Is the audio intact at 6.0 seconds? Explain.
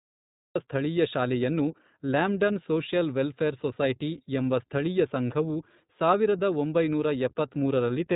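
No. At 6.0 s the speech carries the iLBC codec damage present across the whole clip. Nothing above about 3.8 kHz survives, so the sound is narrowband and dull. Each 20 ms frame's excitation is coded independently of the previous one, which leaves a plainly audible rough, slightly synthetic texture. The degree of coarseness fits iLBC's 15.2 kbps mode.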